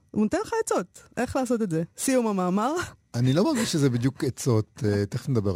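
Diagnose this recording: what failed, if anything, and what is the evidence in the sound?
The failure is at the sample-format conversion stage: crude rate conversion from 0.73 s to the end at 5.56 s. The speech picks up a gritty, inharmonic fizz that follows loud and bright sounds. The pattern fits a 48 kHz to 44.1 kHz conversion done by dropping samples, keeping the nearest one, with no filter. The error sits roughly 25 dB below the signal. On a spectrogram, faint spurious lines appear that don't follow the harmonic stack, and the waveform shows tiny jumps where samples were skipped.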